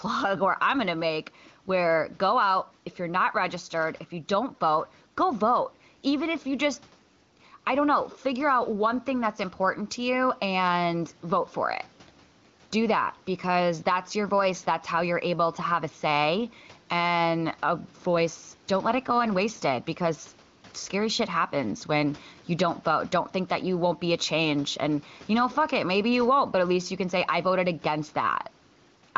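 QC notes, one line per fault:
throughout, gain pumping: the level swings by around 5 dB, and the speech itself sounds squashed, with loud and soft syllables pressed close together in level. The likely cause is input gain set far above what the microphone needs, with a fast compressor or limiter clamping down on each peak and then releasing in the gaps.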